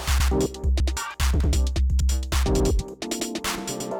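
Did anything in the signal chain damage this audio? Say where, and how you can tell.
Yes, overlapping chunks at the buffer stage: 0.2, 0.8, 1.4, 2.0, 2.6, 3.2 and 3.8 s each replay about 100 ms. That fits 0.5 s chunks starting early. Repeated sound, not missing sound, rules out dropouts.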